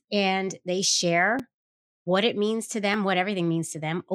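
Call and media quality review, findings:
Repeated buffer at 1.39 s and 2.94 s (after "what it means to"): short click as one 5 ms block plays twice. Late playback buffer; the waveform shows a duplicated segment with hard-edged joins.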